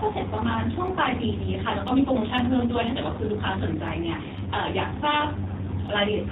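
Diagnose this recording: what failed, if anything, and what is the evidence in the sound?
G.729 codec damage runs through the whole speech clip: nothing passes above 3.8 kHz, and the voice has the rough, synthetic quality of a vocal tract filter and pitch predictor rebuilding it from a few pulses per frame. This points to the codec stage, which fits an 8 kbit/s G.729 stream.

Periodic USB or driver dropouts occur at the driver or buffer stage, every 0.5 s from 0.38 s to 5.88 s, about ten in all. Each one is a small tick where a tiny fraction of a millisecond of audio is skipped, as a blocked bus or driver drops samples at a fixed interval.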